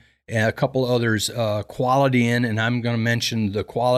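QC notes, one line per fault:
Nothing to flag here, this speech clip came through without a single fault worth noting.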